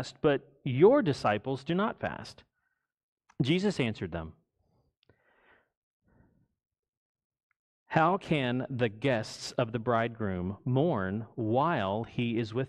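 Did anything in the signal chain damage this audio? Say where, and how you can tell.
No, nothing along the chain seems to have damaged this speech recording; I can't hear any stage leaving a mark on it.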